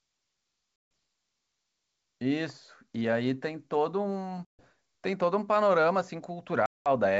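Packet loss on an ADPCM call drops 150, 140 and 200 ms at 0.76–0.91, 4.45–4.66 and 6.66–6.88 s. This desynchronises the decoder's predictor, so each hard silent gap ends in slightly distorted speech that settles within tens of milliseconds.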